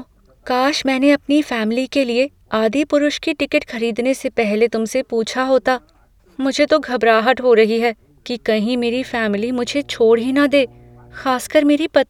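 Mains hum appears from 8.78 to 11.32 s: a steady 60 Hz tone with some low harmonics sits well beneath the speech. The power line is coupling into the signal path, probably through a ground loop or a nearby transformer, and then disappears.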